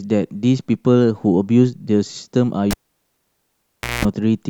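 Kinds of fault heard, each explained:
Cable pulled and plugged in, 2.71 to 4.05 s: a pop as a live cable is yanked out, then about 1.29 s of near silence, then roughly 190 ms of 60 Hz mains buzz while only the plug tip makes contact, and a second pop as the speech returns.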